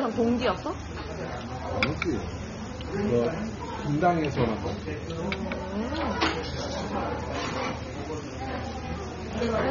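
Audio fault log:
Throughout, AAC compression: the sound is dull and smeared, with a warbling, fizzy texture on sustained parts and nothing above 6.9 kHz. The likely cause is AAC-LC coding starved of bits, lowering the cut-off and leaving spectral holes, which fits roughly 24 kbps.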